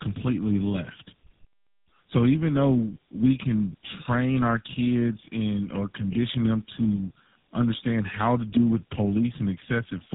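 Throughout, the call passes through tandem speech coding, three speech coders in series, likely ending in GSM full rate, leaving rough, muffled, warbly speech with nothing above 3.8 kHz.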